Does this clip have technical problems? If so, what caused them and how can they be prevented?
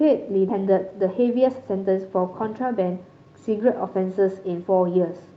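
Yes. A skip ahead at 0.49–0.51 s jumps over roughly a second of speech with no fill, splicing the two sides almost directly after audio was dropped while later audio was already waiting. Sizing the jitter buffer for realistic burst arrivals and limiting network bunching would prevent it.

A jitter buffer speed-up then runs from 0.52 to 3.42 s at about 111% speed, trimming pitch periods to shed about 0.3 s of excess delay, so the speech sounds hurried at normal pitch. Smoother packet delivery, or a gentler catch-up rate, would keep playback speed steady.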